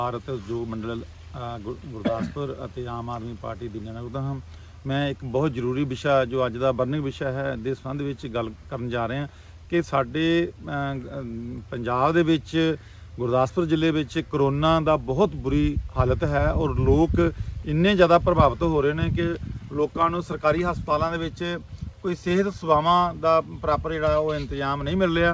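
Nothing's wrong with this one; the sound has just come over a call link whose codec stops everything above 8 kHz, consistent with G.722 at around 64 kbps, and that's simply how that kind of connection sounds.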